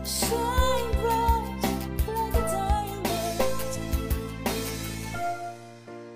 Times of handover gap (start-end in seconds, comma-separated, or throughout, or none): none